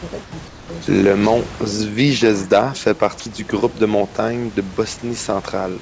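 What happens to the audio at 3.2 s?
Sound dropped by the voice detector, from 3.20 to 3.26 s, just before "du groupe de montagnes". For about 60 ms the speech gives way to steady comfort noise, and roughly 40 ms of actual speech sound is missing. The likely cause is the sender's voice activity detector mistaking part of the speech for background and pausing transmission, with the receiver filling the gap with generated comfort noise until speech resumed.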